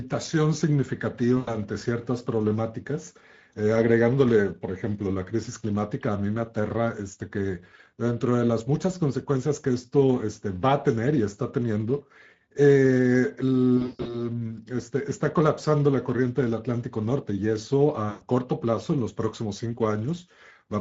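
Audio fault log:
Throughout: Speex codec damage is plainly audible. Too few bits are spent on the CELP excitation, so the sound comes out hoarse and noisy, and any content above 4 kHz is only a shaped noise fill. This fits a Speex mode around 16.8 kbps.
1.37–1.56 s, 13.77–14.19 s, 18.09–18.23 s: VoIP packet loss concealed by the speech codec. The decoder fills about 100 ms, 240 ms and 120 ms of gaps by stretching its last pitch and filter into a fading buzz or coloured noise. In the middle event the losses are scattered, with a longest run of 160 ms.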